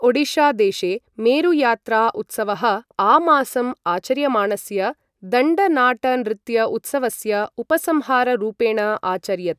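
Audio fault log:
Nothing to log here: I couldn't hear a single fault anywhere in this bit of speech.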